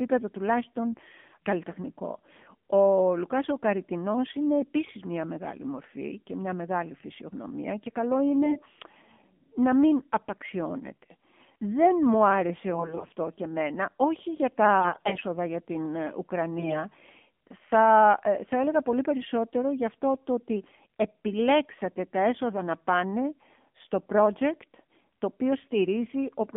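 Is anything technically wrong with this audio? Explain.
Yes. The whole clip has gone through the AMR narrowband mobile codec, most likely at around 7.4 kbps. The line band runs from about 200 Hz to 3.5 kHz, so everything above is gone. At that low rate the vocal-tract model gets very few pulses per frame, and the speech comes out plainly buzzy and synthetic.

On top of that there are four bursts of AMR bit errors: 8.40 to 8.59 s, right after "μεγάλη φυσιογνωμία και καλό"; 12.70 to 13.11 s; 14.80 to 15.24 s, between "και μένα όχι για" and "για την ε"; and 16.58 to 16.81 s, just after "για την ε". Corrupted bits, roughly 7 to 10 percent, misplace the excitation pulses, so pitch and level hold but the voice turns hoarse and gargly.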